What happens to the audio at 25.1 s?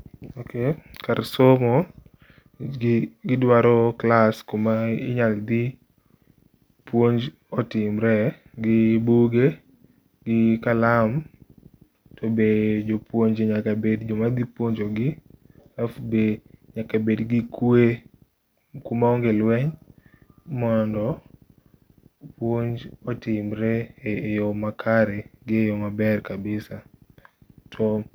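Nothing goes wrong at 25.1 s; the speech carries on intact there, with no dropout, click, distortion or other audible fault.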